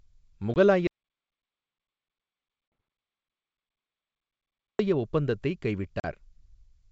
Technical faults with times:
0.54-0.57 packet loss on an ADPCM call
0.87-4.79 audio dropout to silence
2.68-2.72 packet loss on an ADPCM call
6.00-6.06 packet loss on an ADPCM call

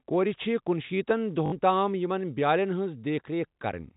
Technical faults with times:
1.46-1.52 packet loss with last packet repeated

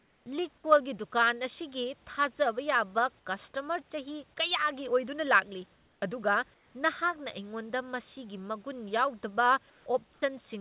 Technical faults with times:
0.00-0.26 comfort noise in place of the background
0.24-0.26 onset clipped by the voice detector
0.62-0.64 onset clipped by the voice detector
5.76-6.02 comfort noise in place of the background
6.54-6.74 comfort noise in place of the background
9.70-9.86 comfort noise in place of the background
10.14-10.22 comfort noise in place of the background

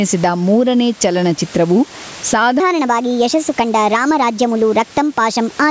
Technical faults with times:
0.00-5.71 gain pumping

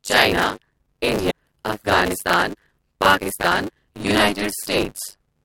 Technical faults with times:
0.00-5.45 buffer tearing
1.27-1.31 damaged data in a compressed stream

